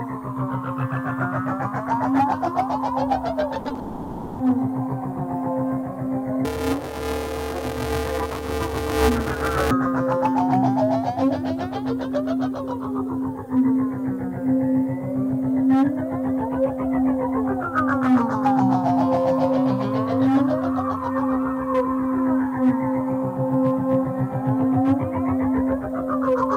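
Starting at 3.59 s and running to 3.78 s there's a burst of repeated packet loss, the robotic kind. Five separate holes land in under two tenths of a second, the longest about 40 ms, and each one gets papered over by stretching the last bit of sound. Nearly half that stretch is concealment rather than real audio, so it comes across choppy, with bits audibly missing between the patches.

Right after, from 3.79 s to 4.40 s, the audio is replaced by a smeared continuation of what came before, roughly 600 ms of it, and it never drops to silence. That's the signature of a long network dropout, likely a stall where nothing arrived and the receiver kept extending the last sound to cover the hole. When the audio picks up again, that six-tenths of a second is simply gone.

Then from 6.45 s to 9.71 s you get buffer tearing. There's a steady buzzy rattle at about 188 Hz, which fits a 256-sample buffer where the writer and the hardware reader have slipped and cross inside every period. 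Roughly half of each buffer is stale audio from about 20 ms earlier, spliced in with hard edges on both sides. The result is a mechanical grind riding on top of the sound, and it only shows up where there's signal.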